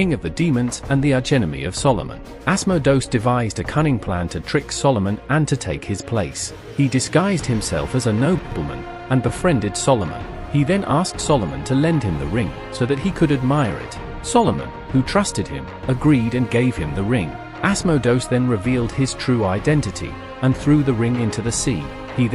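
No technical faults are audible.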